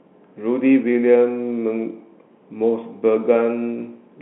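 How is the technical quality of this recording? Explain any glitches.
The technical quality holds up with no glitches to explain, only the narrow band of a G.711 telephone line.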